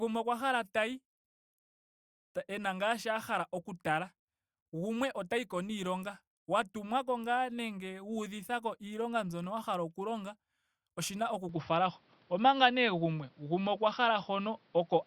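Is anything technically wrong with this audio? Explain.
Yes. From 11.49 s to the end, right after "oshina oku", the speech abruptly turns duller with no gap: nothing remains above 5.8 kHz, the level shifts by about 5 dB, and a new noise floor appears roughly 40 dB down. The likely cause is an input switched to a poorer device with a narrower band and its own noise.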